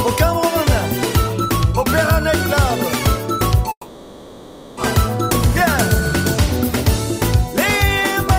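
At 3.71 s the audio breaks off for about 1.06 s, to 4.78 s: the last sound is stretched into a fading buzz, a brief silence follows, and the signal resumes with that stretch missing, the pattern of a long network dropout likely caused by lost packets.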